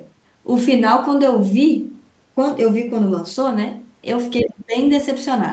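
From 4.42 to 4.75 s speech drops about 30 dB. This is speech suppressed in double talk. An echo canceller likely turned down both this talker and the loudspeaker echo.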